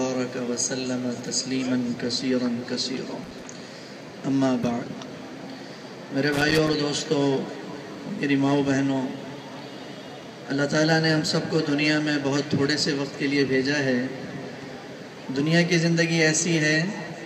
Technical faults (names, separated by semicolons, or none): loose connector crackle